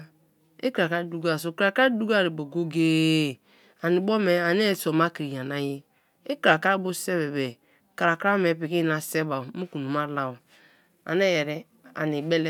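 From 1.9 s, right after "dukoar so kra kra", to the end, the resampler restarts on every block, consistent with a 44.1 kHz to 48 kHz conversion applied to 10 ms blocks, each handled in isolation. The resulting edge errors produce a 100 Hz buzz riding on the speech.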